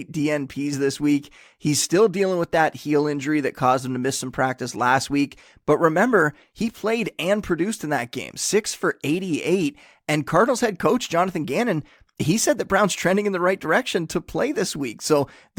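No technical faults can be heard at any point in the recording.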